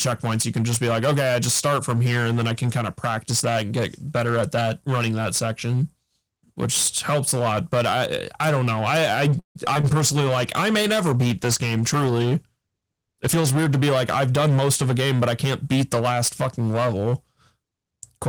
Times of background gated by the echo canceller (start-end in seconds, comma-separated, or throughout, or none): none